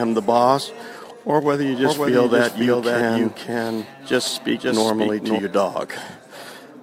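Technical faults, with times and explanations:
1.85–5.39 s doubled audio track: a dry, quieter copy lags about half a second behind, likely from a second capture path; unlike echo, it never decays and switches abruptly.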